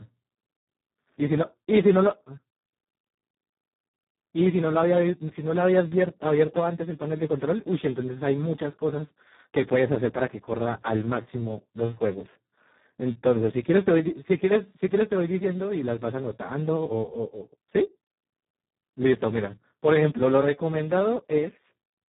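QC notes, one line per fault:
Throughout, Speex codec: the speech comes out hoarse, buzzy and close to robotic because the coder has hardly any bits left for the excitation, which fits a setting down around 4 kbps. Nothing survives above about 3.8 kHz, so everything sounds dull and boxy.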